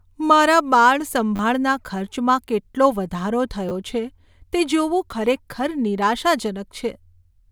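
Repeated buffers at 1.36–1.39 s, 3.69–3.71 s after "કેટલો વધારો", and 5.11 s: late audio made a 10 ms block replay, giving buzzy stutters, with identical waveform segments and vertical spectrogram streaks at each hard join.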